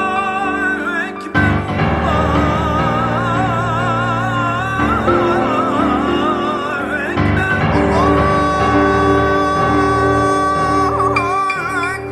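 From 4.23 s to 8.23 s the audio switches abruptly to an adaptive stream at a lower bitrate, consistent with a drop from about 64 to 24 kbit/s Opus after the connection slowed. Codec artefacts rise for those four seconds, with no gap at either transition.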